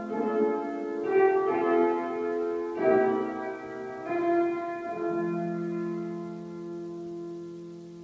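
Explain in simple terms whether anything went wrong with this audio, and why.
Nothing went wrong here.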